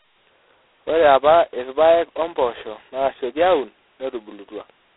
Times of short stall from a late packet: none

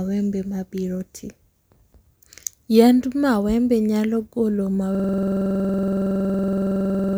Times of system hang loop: 4.95-7.18

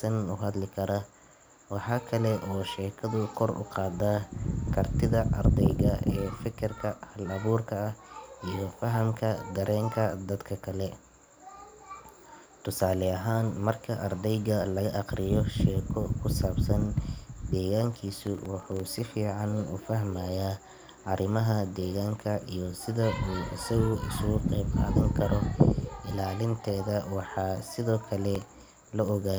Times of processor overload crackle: 17.94-18.87, 28.35-29.22

